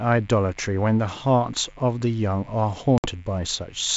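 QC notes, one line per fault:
Throughout: mains buzz. Switching spikes from the 50 Hz supply leak into the signal path twice per cycle, stacking harmonics up into the kilohertz range. The result is a steady, raspy buzz sitting roughly 30 dB below the speech.
2.98 to 3.07 s: packet loss on an ADPCM call. About 60 ms of audio goes missing, consistent with a few consecutive packets dropped on the G.722 stream, and is replaced by a hard-edged silent gap. The decoder's predictor and step size fall out of step, so speech resumes with brief, slight distortion before settling.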